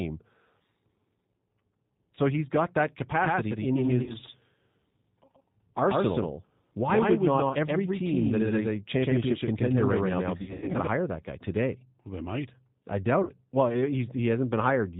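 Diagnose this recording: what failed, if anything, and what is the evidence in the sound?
The speech sounds rough and slightly synthetic throughout, with nothing above 4 kHz. That points to the codec stage: G.729 coding, consistent with an 8 kbit/s G.729A coder. It rebuilds each 10 ms frame from a vocal tract filter, a pitch predictor and a few pulses, and audibly discards detail.

Brief buzzy, fading smears replace the speech at 2.15–2.20 s (just before "he's got that"), 4.03–4.14 s, 7.49–7.55 s and 13.23–13.31 s (right after "they might I"). A longer broken stretch runs from 10.38 to 10.77 s, with gaps scattered over about 360 ms and the longest near 100 ms. This is VoIP packet loss concealed by the speech codec. Lost packets on the network make the decoder extrapolate its last frame and fade it, and the speech recovers only gradually afterwards.

From 3.21 s, right after "he's got that", until 10.87 s, just before "hire that guy today", every sound is followed by a full-band copy at about equal level, roughly 150 ms behind, with no room decay. 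Both ends switch abruptly. This doubled audio track likely comes from a second, slower capture path being mixed into the call.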